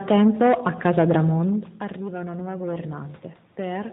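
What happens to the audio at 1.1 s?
At 1.1 s the AMR narrowband mobile codec is at work, as it is throughout: nothing above 4 kHz, and a buzzy, synthetic pulse-driven voice that suggests a bitrate around 10 kbps. Unlike simple low-pass filtering, the voice itself sounds modelled. The level change as the talker moves near 1.0 s is not a fault.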